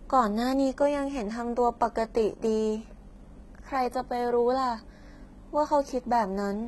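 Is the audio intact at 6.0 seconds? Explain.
No. At 6.0 s the speech, like the whole clip, has a gritty, metallic treble with nothing above 11.8 kHz, likely from heavy HE-AAC compression rebuilding the highs by band replication at a low bitrate.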